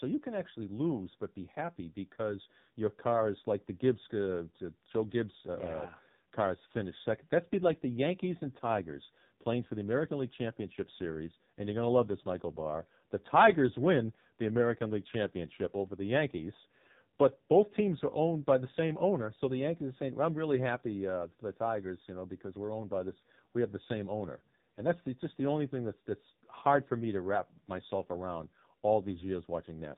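Throughout, the voice sounds buzzy, thin and synthetic, with nothing above 4 kHz. That is the AMR narrowband mobile codec: an 8 kHz vocal-tract model driven by sparse pulses. The heavy damage points to one of its lowest bitrates, around 6 kbps.

From 2.14 to 2.17 s, between "lose but be happy" and "your car is like", there is a brief dip or warble. These are lost AMR speech frames. The decoder patched about 20 ms, consistent with a single missing frame, by reusing the last good pitch and vocal-tract settings at reduced gain.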